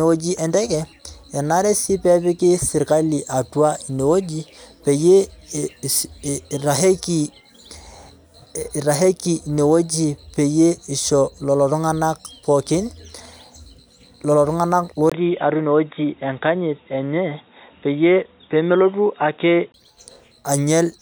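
At 15.10 s the speech drops out for 20 ms, then returns dull and boxy with nothing above 3.8 kHz and a faint new noise floor until 19.74 s, likely the input switched to a poorer device.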